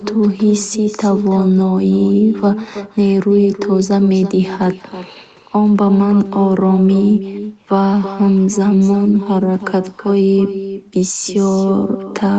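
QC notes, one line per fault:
Throughout: echo with no canceller. The speech is trailed by a quieter, thinner copy about a third of a second later, roughly 11 dB down, picked up from the far loudspeaker and returned.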